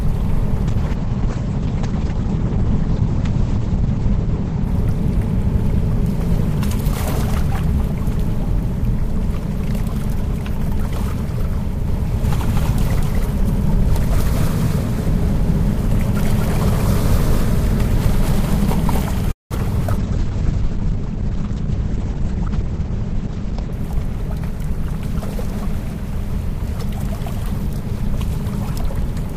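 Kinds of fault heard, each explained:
call bitrate drop: The call's bandwidth estimate collapsed twice, forcing the encoder from 64 kbps down to 10 kbps at 0.69–4.73 s and to 9 kbps at 19.97–23.79 s. Coarser coding and a treble cut from 20 kHz to 8 kHz leave the sound muffled and rough.
doubled audio track: A second copy of the audio, likely from a slower capture path, is mixed in from 11.88 to 19.04 s, trailing by about a fifth of a second at roughly equal level. It starts and stops abruptly, giving a dry, stuttering echo.
call audio freeze: Packets were likely held up until the jitter buffer emptied at 19.31 s, so playback stretched the last sound briefly, then fell silent for about 0.17 s. The audio resumes where it left off at 19.54 s, with about 0.19 s of delay inserted.
short concealed packet loss: Two 40 ms stretches never reached the decoder in time, at 19.87 and 19.97 s. The receiver bridged each hole by extending the preceding sound and blending back, so each shows as a brief smear or wobble.
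skip ahead: Right between those two losses, at 19.92 s, audio was dropped while later packets were already queued. Playback jumps forward almost seamlessly, and something like 70 ms of sound is simply gone, leaving an abrupt join.
jitter buffer speed-up: With too much audio queued after the earlier disruption, the receiver trimmed short pitch-period pieces repeatedly from 21.66 to 22.84 s. That removes around 50 ms, running the sound about 4% fast at unchanged pitch.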